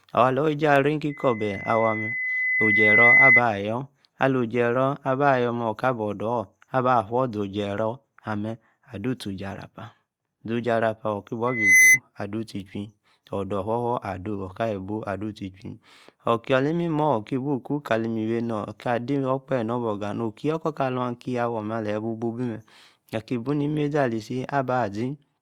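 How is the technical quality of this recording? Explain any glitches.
The speech recording has loudspeaker feedback squeal at 1.09–3.42 s and again at 11.47–11.99 s. A microphone re-amplifies its own loudspeaker until a 2 kHz tone runs away. It swells over about two seconds the first time and within a fraction of a second the second time, peaking roughly 10 dB above the speech. Unlike a steady interfering tone or hum, it grows from nothing.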